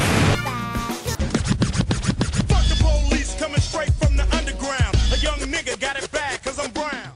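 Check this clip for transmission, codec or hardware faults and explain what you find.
Nothing to report: no transmission, codec or hardware faults can be heard anywhere in the clip.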